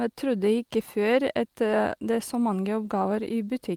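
At 2.85 to 2.87 s, right after "så mange", there is a lost packet rebuilt from error correction. About 20 ms of speech, which fits a single lost packet, was replaced by the low-bitrate copy carried in the next packet. There is no gap, but that brief stretch sounds rougher and noisier.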